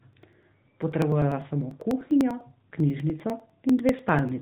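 Throughout, the speech carries AMR narrowband mobile codec damage: everything above 4 kHz is gone, leaving a flat spectrogram ceiling, and the voice sounds plainly buzzy and synthetic, consistent with a mid-rate mode near 10 kbps. From 0.13 to 4.29 s, periodic USB or driver dropouts skip about 1 ms of audio every 0.099 s, roughly forty times. Each produces a regular tick, a waveform discontinuity, and an evenly spaced thin vertical broadband line.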